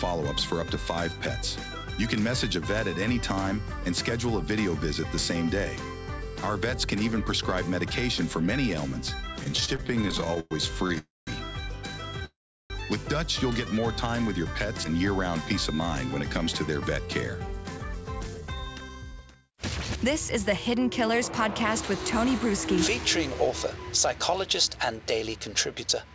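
From 9.44 to 10.98 s there are repeated stalls (stutter). The playback stops 21 times in quick succession. The longest stop lasts 111 ms. About a quarter of that stretch, 384 ms in all, is filled in by the receiver. Packets were arriving late, so the jitter buffer kept running dry. Each time, the last sound was stretched to cover the wait. Nothing is lost, but the audio drags and jerks forward.

Right after, from 10.98 to 11.29 s, comes a call audio freeze. The sound holds for 287 ms in all and fades to silence for the final 180 ms of it. A second freeze runs from 12.25 to 12.72 s. It lasts 452 ms, and 360 ms of that is silent. The likely cause is packets held up in transit, which left the buffer empty. When they arrive, the audio resumes where it stopped. A gap is added, and nothing is cut.

From 13.68 to 14.25 s there is a jitter buffer slow-down. The audio plays at 94% speed, and 41 ms is added. 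The buffer was low, so the receiver repeated tiny pitch-length pieces to rebuild its reserve. The pitch stays the same. Sounds are drawn out slightly and may waver a little.

From 16.10 to 23.48 s there is a jitter buffer speed-up. The audio runs at 105% speed. About 0.4 s is removed across that span. The buffer held more than its target, so the receiver cut out many small pitch-period pieces to reduce the delay. The pitch is unchanged, but the sound feels hurried. All of this travels over a WebRTC call path. Nothing above 8 kHz is audible, which fits G.722 at 64 kbps.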